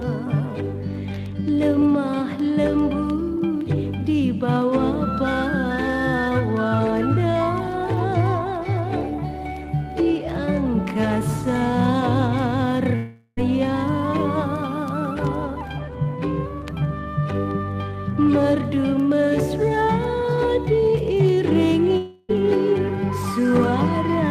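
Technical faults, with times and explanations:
12.95–13.39 s and 21.97–22.31 s, long network dropout: the sound turns into a fading buzz-like smear. The first lasts about 0.42 s and ends in roughly 30 ms of silence. The second lasts about 0.32 s and fades straight back into the audio. Each time the audio resumes further on, with that stretch missing. This is likely a lapse in arriving audio, which the receiver covered by extending and fading the last sound it had.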